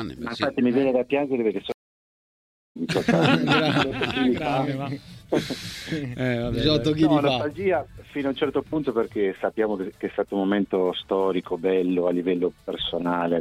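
At 1.72 s a stream reconnect occurs: the connection drops and a fresh decoder restarts, leaving about 1.04 s of silence until 2.77 s, resuming roughly a second further on.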